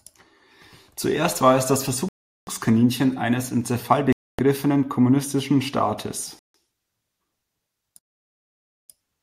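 The speech drops to complete silence four times, each gap ending with the sound resuming where it left off or slightly later. The first runs from 2.09 to 2.47 s (about 0.39 s), then 4.13 to 4.39 s (0.26 s), 6.39 to 6.55 s (0.15 s), and the longest from 7.99 to 8.89 s (0.9 s). The clean cut-outs point to a likely Bluetooth stall, where interference delayed packets, the receiver's buffer ran empty and playback paused until retransmitted data arrived.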